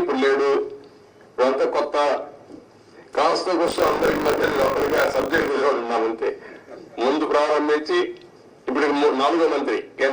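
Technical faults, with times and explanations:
3.66–5.49 s, buffer tearing: a robotic rattle buzzes at 50 Hz over the sound. The ring buffer's writer and reader have slipped, so about a fifth of each period, which points to 20 ms buffers, replays audio from some 40 ms earlier with abrupt joins.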